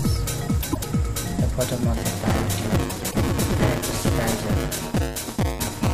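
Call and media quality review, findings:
Frames out of order, 0.62–0.86 s: garbled flutter from a decoder or jitter buffer playing two adjacent 104.5 ms blocks swapped, which fits four codec frames each. No time lost or repeated, unlike a dropout or concealment.

Frames out of order, 2.89–3.15 s: same swapped 104.5 ms pair and the same three-join flutter, overlapping the buzz below.

Buffer tearing, 1.97 s to end: steady robotic buzz at 200 Hz, present only while sound plays. The audio output ring buffer's writer and reader are crossing each period, so roughly a fifth of every buffer replays audio about 10 ms stale, hard-joined both sides. Unlike clipping, the buzz tracks buffer rate, not level.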